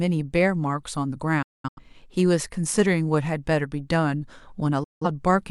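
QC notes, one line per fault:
1.42–1.81 s, digital broadcast dropout. The speech cuts out in several short holes totalling 0.3 s, longest 0.21 s. The receiver mutes with 8 ms fades whenever frames fail, then resumes.
4.84–5.06 s, digital broadcast dropout. A 0.17 s mute with 8 ms fades. The speech sent in that gap is lost.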